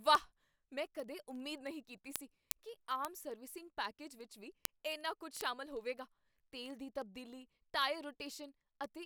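Speech runs under a steady train of sharp word clock ticks from 0.11 s to 9.02 s, roughly every 40 ms and uneven in strength. An unlocked receiver clock drifting by around 500 ppm drops or repeats single samples. Their regular spacing separates them from random dropout clicks.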